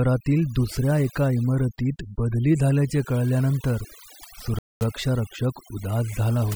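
Right from the start the speech carries overdone noise removal. The background has been pushed down, but little twinkling specks keep popping up in it. That's a noise reducer set far too hard: any frequency band sitting close to what it took for noise gets turned way down or switched off, and the softer bits of the speech get swallowed along with the noise.

Then at 4.59 s the sound drops out completely for about 0.22 s, coming back at 4.81 s. That abrupt hole followed by a clean pick-up points to a Bluetooth stall. Most likely, interference held up the packets heading to the headphones, their buffer ran empty, and playback simply froze in silence until the delayed packets finally got through and the audio carried on.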